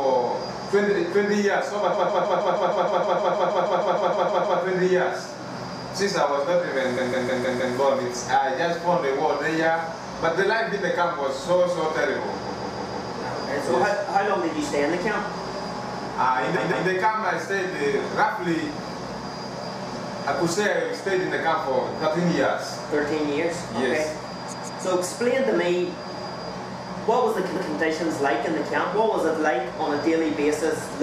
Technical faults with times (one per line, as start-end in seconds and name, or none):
1.92-4.59 repeated frames
6.96-7.75 repeated frames
12.45-13.08 repeated frames
16.55-16.86 repeated frames
24.52-24.83 repeated frames
27.55-27.71 repeated frames